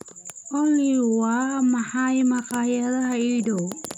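Listening through this short speech recording, nothing technical stood out.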